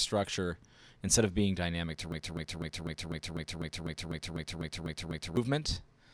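At 2.12 s the audio locks into a broken-record loop: a chunk about 0.25 s long plays 13 times back to back, identical each pass, until 5.37 s. It sounds like a stuck skipping disc, with a steady stutter at roughly four repeats a second. The likely cause is the player, encoder or stream stalling and resending the last fragment it had buffered. Whatever should have played during those three-odd seconds is simply gone.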